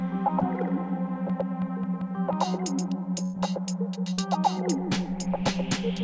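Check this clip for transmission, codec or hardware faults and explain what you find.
Four faults can be heard in this music clip, all of three kinds. They sit on top of a call path whose band stops at 8 kHz, which fits G.722 at 64 kbps.

Short concealed packet loss happens twice. The first is at 0.40 to 0.43 s, with about 20 ms missing. The second is at 4.13 to 4.19 s, with about 40 ms missing. Each time, audio failed to reach the decoder in time. The receiver extended the last sound to cover the hole, then blended back into the real signal. Each is heard as a brief smear or wobble in the music.

A train of clicks runs from 1.30 to 2.34 s. There are about seven clicks at an uneven pace, averaging 4.85 per second. They peak at about 5 dB above the music. Similar pulses recurring like this likely come from electrical interference or a faulty connection or power supply. They are heard as irregular ticking laid over the sound.

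A burst of packet loss occurs at 3.23 to 3.35 s, with 100 ms of audio gone. The receiver kept playing the last sound and turned it down as the gap went on. There is no silent stretch. The held, fading tone then jumps ahead to later music, and the part in between is simply missing.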